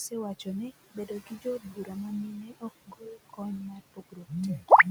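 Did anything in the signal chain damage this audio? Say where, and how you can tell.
Yes. The call processing stage is at fault. Its noise suppressor runs for the whole clip, pulling what it judges to be steady noise down by about 17 dB, frame by frame. The room noise, which sits about 15 dB below the speech, ends up pumping: it sinks in the gaps and swells back under each phrase. These are noise suppressor artifacts.

The same suppressor also cuts speech, misreading parts of it as noise. This happens between 0.84 and 1.9 s, 2.42 and 2.64 s, 2.87 and 3.4 s, and 3.73 and 4.32 s. In each window, stretches of speech drop by about 16 to 18 dB, adding up to a few hundred milliseconds per window and somewhat less in the short one at 2.42 s. You can tell from the soft consonants and trailing syllables there, which go faint or vanish along with the background instead of holding their level.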